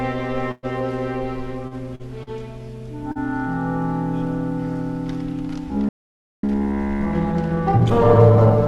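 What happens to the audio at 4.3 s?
Nothing goes wrong at 4.3 s: the audio is intact at that moment, passing through the call path with its ordinary coding and no dropout, glitch or distortion.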